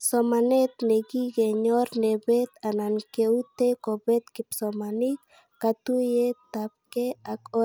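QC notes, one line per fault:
Nothing to flag here; the speech comes through with no technical faults to note.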